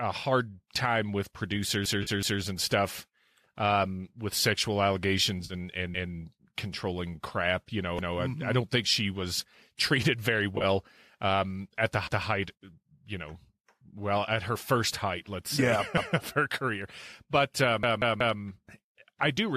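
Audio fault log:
1.86–2.42 s, 5.94–6.13 s, 7.99–8.17 s, 12.07–12.26 s (just after "um at the") and 17.83–18.39 s, repeated buffer: a stuttering loop in which a chunk of about 186 ms plays again with a hard join. The first and last runs repeat three extra times, the others once. New audio arrived late, so the device replayed its last buffer, which fits an 8192-sample buffer.
2.03 s (between "hard time with" and "and stuff um with"), 5.45–5.54 s and 10.56–10.65 s (between "she was treated very" and "um at the"), AAC frame loss with concealment: brief smeared, phasey patches lasting 40 to 50 ms, the last broken into short runs spread over 80 ms. Lost frames were filled in by the decoder from the last good spectrum.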